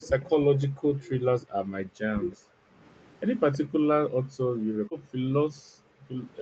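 From 0.0 to 2.32 s the speech dips and cuts out in pieces, about 1.5 s in total and as deep as roughly 40 dB. This is speech suppressed in double talk, likely from an echo canceller turning the near talker down along with the far side. A waveform shows the envelope collapsing in patches, and a spectrogram shows energy thinning out, highs first.

Inside that stretch, faint echo leak appears at 0.02 to 0.07 s and 1.41 to 1.45 s, and again at 3.52 to 3.58 s. Each is a brief copy of the sound about 320 ms late, roughly 25 to 30 dB down, likely residue the canceller missed. A spectrogram shows weak, smeared repeats of earlier harmonic patterns.

The background gated by the echo canceller drops the room sound by up to 26 dB at 2.6 to 2.75 s. From 3.64 to 6.15 s it drops again, by up to 40 dB, for about 2 s altogether. The canceller clamped the microphone while the loudspeaker played. On a spectrogram the noise floor goes dark in blocks, with the band still ending at 8 kHz, and on a waveform the quiet floor flattens to near silence.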